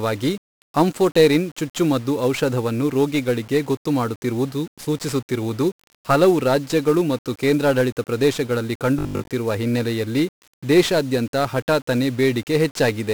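The whole recording carries 1-bit DFPWM compression. Each sample is stored as a single bit that nudges an adaptive level up or down. That coarse steering leaves loud, broadband quantisation noise over the speech. The damage here is heavy. Everything sounds fuzzy and crackly, and the upper frequencies sink under a bed of hiss. The density of that noise points to a low rate of around 48 kbps.

From 8.99 to 9.29 s, right after "ರಾಜ್ಯಗಳು ಮತ್ತು ಕೇಂದ್ರಾಡಳಿತ ಪ್ರದೇಶಗಳಲ್ಲಿ", the voice turns robotic. The robotic sound is likely from repeated short buffers: fresh audio arrived too late, so the last fragment was replayed in a loop. The buzz sits at 50 Hz, which fits a 20 ms fragment. Most of the stretch is repeats, so real audio is skipped. It sounds like a stiff metallic drone until "ಹಿನ್ನೆಲೆಯಲ್ಲಿ ದೇಶಾದ್ಯಂತ ಹಠಾತ್ತನೇ".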